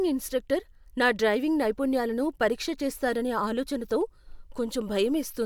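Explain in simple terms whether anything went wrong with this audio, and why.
Nothing went wrong; no faults can be heard anywhere.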